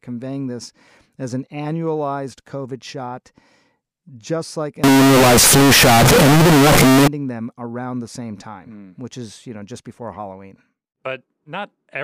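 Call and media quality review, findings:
Float read as integer, 4.84–7.08 s, after "just like", until "them around the same". Near-square, very loud, harsh, pinned at a fixed high level; noise as loud as speech, pitch traceable. Likely 32-bit float samples decoded as 32-bit integers.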